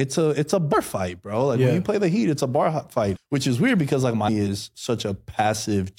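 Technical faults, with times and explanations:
3.15 s, compressed frames skipped. The speech lurches forward at this point. About a fifth of a second of audio never plays. The decoder likely never received these frames or rejected them as damaged, and continued with the next good one. The gap suggests roughly seven frames of about 26.1 ms each. Neighbouring frames overlap, so the join is a short smeared blip rather than a sharp click.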